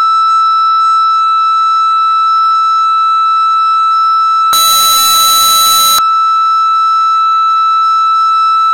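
A music clip with one fault: from 4.53 s to 5.99 s the 16-bit samples are likely being read with signed and unsigned mixed up, so the top bit of every sample is flipped. Each time the waveform crosses zero it leaps from one end of the range to the other. For that stretch the music turns into a very loud, harsh distortion, and quiet moments come out as loud as everything else.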